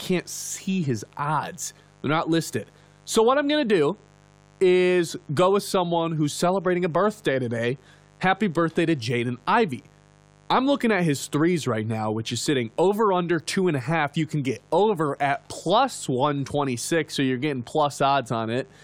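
A steady, raspy buzz sits under the speech from start to finish, roughly 30 dB below it. This is mains buzz on a 50 Hz supply: something like a dimmer, a rectifier or an unshielded cable is letting sharp switching spikes into the signal twice per mains cycle, and those spikes carry a ladder of 50 Hz harmonics reaching up into the low kilohertz, which gives the hum its gritty edge.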